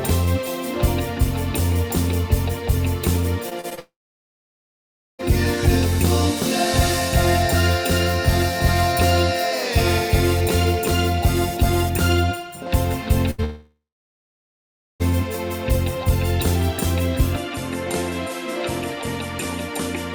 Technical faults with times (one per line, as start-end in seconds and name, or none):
3.49-3.79 repeated packet loss (robotic sound)
3.79-5.21 long network dropout
13.31-13.40 burst of packet loss
13.44-15.02 long network dropout
17.36-20.14 input switched to a poorer device